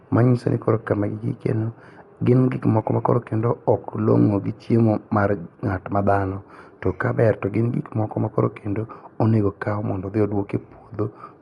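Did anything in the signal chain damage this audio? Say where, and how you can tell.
Yes, at the codec stage, and it runs the whole way through this speech. Nothing comes through above about 11.4 kHz, so it sounds dull, and there's a rough, fluttering noise riding on the voiced parts. That's likely Dolby Digital compression at a starved rate, something like 64 kbps: the encoder narrows the band and leaves many frequency lines with no mantissa bits, and the decoder fills them with dither noise. That fill is the grit you hear around the tones.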